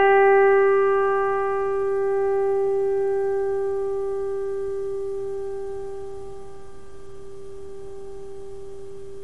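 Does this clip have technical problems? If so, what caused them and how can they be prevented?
No, this clip has no technical problems, so there is nothing to prevent.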